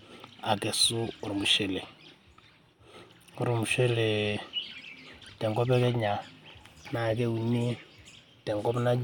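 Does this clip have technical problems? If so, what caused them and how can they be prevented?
No, there are no technical problems to be heard in this speech clip. With no fault present, there is no cause to identify and nothing to prevent.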